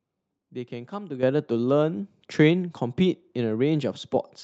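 Speech over a call, and the level jumps twice: the microphone volume stepped up by about 9 dB at 1.23 s, then by a further 2 dB or so at 2.25 s. Both the voice and the room noise lift together, which tells you it's the input gain being raised at the device, with the call software deciding the mic was too quiet, not anything in the talking. The sound is capped around 8 kHz, which fits the Opus call path.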